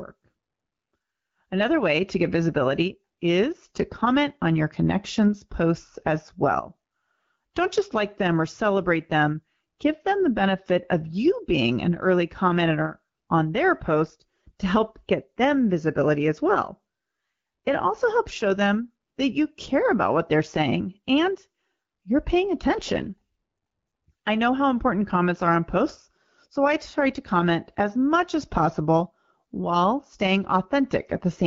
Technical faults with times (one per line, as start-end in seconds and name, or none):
22.97-23.07 AMR bit errors